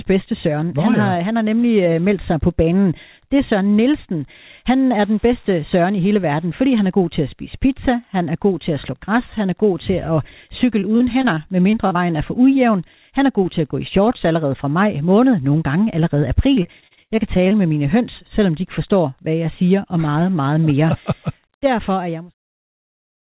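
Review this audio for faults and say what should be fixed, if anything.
Choppy, robotic speech with small pieces missing appears from 10.8 to 11.97 s and again, more severely, from 16.55 to 17.53 s, where the longest hole is 76 ms and roughly a quarter of the stretch is patched. This is repeated packet loss: the concealer keeps extending the last sound over each lost packet, which produces the robotic stutter. A larger jitter buffer, forward error correction, or a more stable network link would prevent it.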